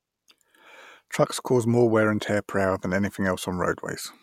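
Nothing goes wrong anywhere in this short bit of speech, so there's really nothing to flag here.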